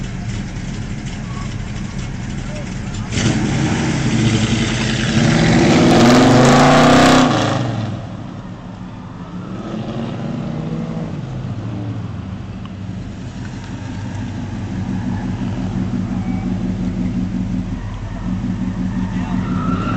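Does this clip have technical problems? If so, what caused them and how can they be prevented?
No, there are no technical problems in this clip.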